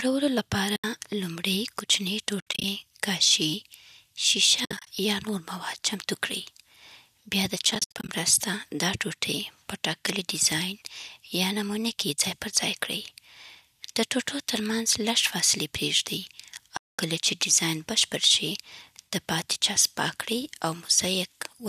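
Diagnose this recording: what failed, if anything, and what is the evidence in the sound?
AAC frame loss with muting occurs at 0.76–0.84 s, 2.40–2.64 s, 4.65–4.87 s (just before "یا نور"), 7.65–8.09 s and 16.77–16.99 s (between "ترمنځ لږ فاصلې پریږدئ" and "کله چې"). This is a network failure handled at the codec: the decoder zeroed each missing frame's spectrum, and overlapping windows fade the sound out and back in, leaving soft-edged holes. Several are clusters of short dropouts, the longest runs around 70 ms. The steps fit roughly 10 ms frames, likely from low-delay AAC.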